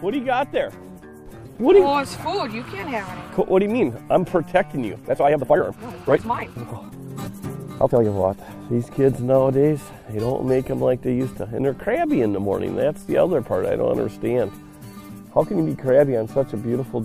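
From 4.91 s to 8.05 s the audio runs at about 1.74 times its normal pace while its pitch stays where it was, and the pace change is abrupt at both ends of the section. This is a time-stretched section: software likely squeezed this part to fit a shorter length, holding the pitch by discarding short pieces of the signal as it went. The result is a rushed stretch between two passages at the normal rate.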